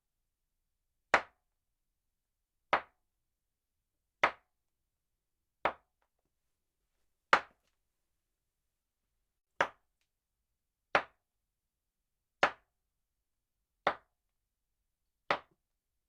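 A late packet left the jitter buffer empty at 9.39 to 9.50 s, causing a short stall: the sound is held about 80 ms too long, with a faint buzz or dip.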